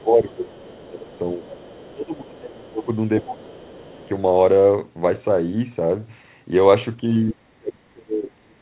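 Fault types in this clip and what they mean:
Speech suppressed in double talk: The voice sinks in level in three stretches, early, from about 1.8 to 4.0 s, and at the end, with drops reaching roughly 15, 25 and then 35 dB. The likely cause is an echo canceller ducking the talker while the far side was also speaking.
Other side's voice leaking through: A faint second voice sits underneath, first for over a second near the start, then in short scraps around 2.4 s and 3.7 s, roughly 25 to 35 dB below the talker. Likely residual loudspeaker echo that the canceller failed to remove from the microphone.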